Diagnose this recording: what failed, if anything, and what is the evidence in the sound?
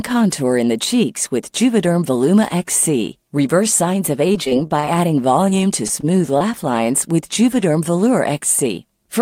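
Choppy, robotic speech at 4.27–4.98 s and 5.49–6.42 s points to repeated packet loss on the network, with each short gap patched by extending the preceding sound.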